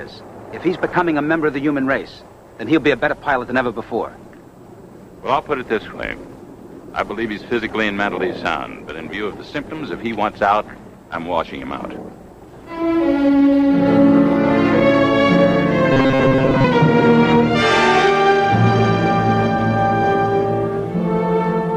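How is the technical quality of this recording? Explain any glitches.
There is one glitch. From 15.93 to 16.64 s the sound turns into a rigid, metallic buzz pitched at about 134 Hz, which loosely tracks the original's shape. This is robotic sound from repeated short buffers. The likely cause is audio arriving too seldom, so the player keeps looping a tiny slice, around 7.5 ms long given that buzz frequency, in place of the missing material. Most of that stretch is repetition rather than genuine audio.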